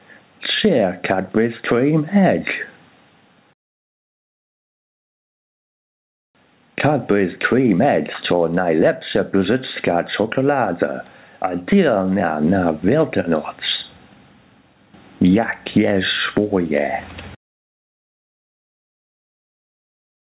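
Throughout, the level pumps, a gain swing of around 15 dB. This gain pumping is likely an over-driven input pulled down by a fast limiter. Everything above 4 kHz is missing, which fits a G.711 telephone codec on the call path.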